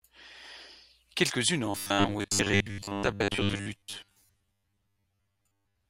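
From 1.66 s to 5.89 s the speech takes on a robotic sound, a rigid metallic buzz near 100 Hz that tracks the words only loosely. This is likely from repeated short buffers: audio arriving too seldom, with a roughly 10 ms segment looped over most of the gaps.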